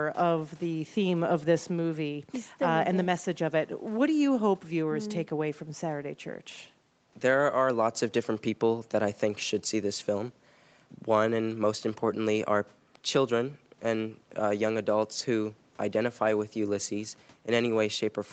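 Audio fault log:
No fault is present: the speech shows the normal signature of a call chain, with the microphone processing's high-pass trimming the lowest bass and the Opus codec at 32 kbps limiting content to 8 kHz, both working as intended.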